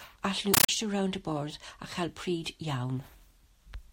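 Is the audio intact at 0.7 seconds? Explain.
No. Loud chattering static, bursting about 31 times a second, replaces the speech from 0.54 to 0.69 s: a compressed stream played as audio, undecoded AC-3 data heard as raw samples.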